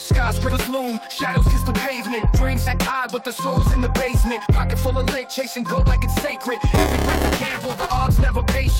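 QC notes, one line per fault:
0.48, 2.66, 4.45 and 5.77 s: compressed frames skipped. The audio jumps ahead by a few 23.2 ms frames, roughly 50 to 100 ms each time. Overlapping neighbour frames smear each join into a short blip rather than a hard click.
6.74–7.90 s: buffer tearing. A steady robotic buzz at 345 Hz, present only with signal, which fits a 128-sample buffer. Writer and reader cross each period, so about a third of every buffer holds audio roughly 10 ms old, with hard joins.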